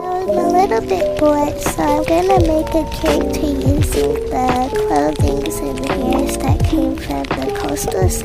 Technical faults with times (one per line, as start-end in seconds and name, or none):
none